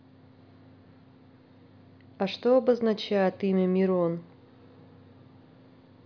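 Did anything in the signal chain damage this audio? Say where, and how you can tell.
No, nothing stood out on listening to this speech recording, and no stage of the chain left a mark I could hear.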